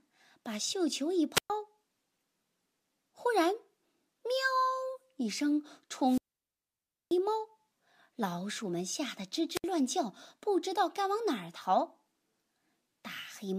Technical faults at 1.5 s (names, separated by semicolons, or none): wireless microphone squelch dropout